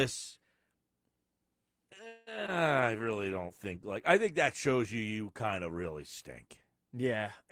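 At 2.07 to 2.29 s the sound stalls into a fading continuation of itself for about 0.19 s, a call audio freeze. Packets were likely held up in transit, letting the jitter buffer run dry; the receiver extended the last sound, then resumed where it stopped, adding delay without losing material.

Shortly after, from 2.47 to 2.50 s, short concealed packet loss leaves a brief smear. Roughly 20 ms of audio never arrived in time, and about 12 ms of synthesized continuation bridges the hole before blending back into the real signal.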